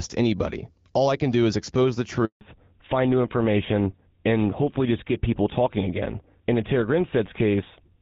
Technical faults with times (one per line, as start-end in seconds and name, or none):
2.25-2.41 handover gap
2.41-8.01 fallback to narrowband